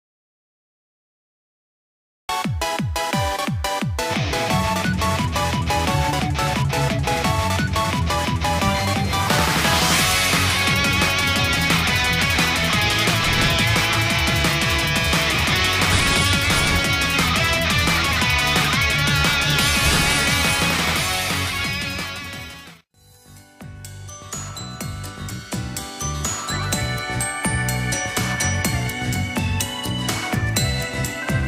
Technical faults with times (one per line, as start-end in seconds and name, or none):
0.00-2.29 audio dropout to silence